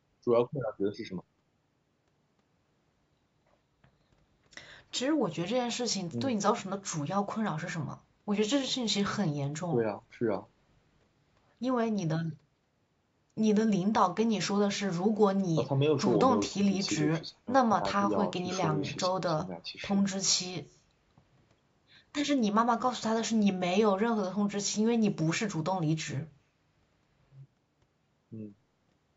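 No technical faults can be heard anywhere in the speech. The call's microphone processing is audible only as a normal trim of the lowest bass and a band that stops at 8 kHz.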